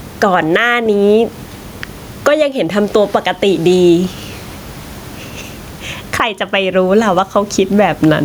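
Gain pumping runs through the whole speech clip. The gain is pulled down on each loud sound, a swing of around 15 dB, so loud and soft parts end up closer in level and the sound is squashed, with the quiet room noise sitting some 38 dB below the speech. The likely cause is input gain set far too high with a fast limiter clamping each peak. On a waveform the loud and soft parts sit closer in level.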